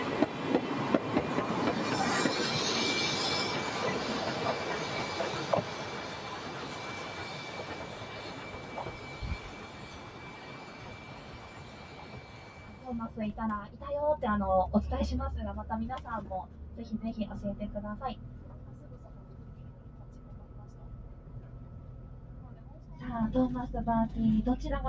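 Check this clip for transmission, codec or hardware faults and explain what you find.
One fault is present, running through the whole clip.

Noise suppressor applied to music or sounds, from start to finish. A suppressor tuned for speech treats sustained tones, ambience and decay as noise and pulls them down, while the onsets of new sounds pass largely intact. Here the level of held material and tails swings by around 10 dB as the suppressor engages and releases. The audio pumps and flutters, and the room sound thins between attacks. The call's microphone path, with nothing above 8 kHz, works as expected.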